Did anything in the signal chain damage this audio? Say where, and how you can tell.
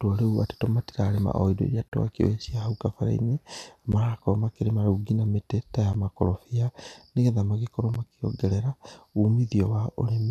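Yes, gaps at the joins of encoded pieces: gaps at 1.88 s (37 ms), then 3.92, 5.93 and 7.94 s (11 ms each). The two-second spacing points to separately encoded chunks spliced without trimming the encoder's start delay and last-frame padding.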